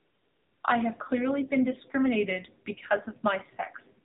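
From 0.0 to 0.64 s, AMR comfort noise stands in for the opening: no speech frames were sent, so the receiver generated a smooth, steady synthetic hiss in place of the real background. Throughout, the speech passes through the AMR narrowband mobile codec at 7.4 kbps: nothing above 4 kHz survives, and the sparse pulse excitation leaves the speech plainly buzzy and synthetic.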